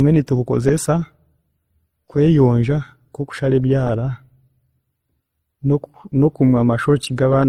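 Transcoding between lossy codecs affects this whole speech clip: two kinds of compression artefact are heard together, likely an MP3 encode around 64 kbit/s re-encoded as Opus around 24 kbit/s. Opus spends bits reproducing MP3's smearing while adding its own, and nothing is present above 20 kHz.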